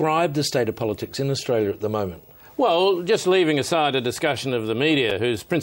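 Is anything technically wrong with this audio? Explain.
Yes. At about 5.10 s there is a brief jumbled flicker, a tiny stutter where the sound seems to skip forward and then back. This is a case of chunks out of order: one chunk of about 5.33 ms was delivered one chunk late, so it plays after the chunk that should follow it. Nothing is missing, but the swapped order creates three abrupt joins, and those discontinuities produce the momentary scramble.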